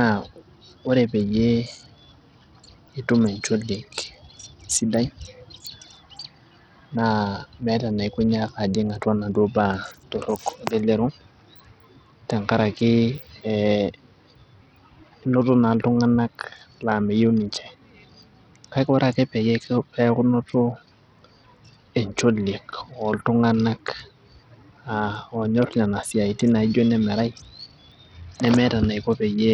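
From start to end, the speech carries heavy coding damage that is likely Bluetooth SBC compression, with a starved bit allocation that fits a rate near 64 kbps. SBC splits the signal into a few wide sub-bands and hands out bits with no hearing model, so the top bands lose their share. Sibilance and treble flicker in and out, and a gritty, aliased roughness rides on the speech. Unlike a clean low-pass filter, the top end is ragged and unstable rather than smoothly cut.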